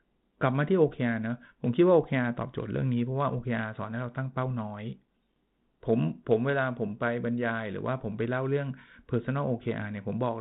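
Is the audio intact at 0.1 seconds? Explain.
Yes, the audio is intact at 0.1 seconds, with no fault at that moment.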